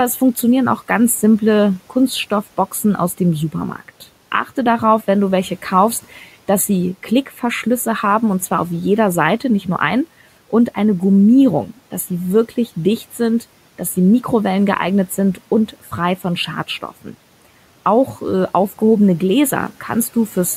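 From start to finish the speech has a hollow, phasey edge, with the upper range thinned by a fixed notch near 5 kHz. That is channel delay (comb filtering): one channel runs a few samples late, roughly 0.1 ms, and summing to mono cancels their shared content at regularly spaced frequencies.

Between 7.26 and 7.43 s, right after "welche kaufst dass sie" and before "haben und zwar auf", the speech briefly dips and sounds swallowed, falling by about 8 dB for roughly a tenth of a second. This is speech cut by the noise suppressor, which mistook that stretch for background noise and attenuated it along with the room noise.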